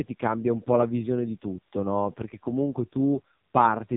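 From start to finish the speech carries AMR narrowband mobile codec damage. Nothing passes above about 3.7 kHz, and the heavy buzzy, synthetic texture of the pulse-driven vocal-tract model fits one of the lowest AMR-NB modes, around 5 kbps.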